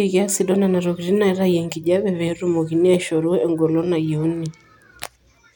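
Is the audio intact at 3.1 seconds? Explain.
Yes, at 3.1 seconds the speech plays through cleanly, with no dropout, click, distortion or other break in the audio at that moment.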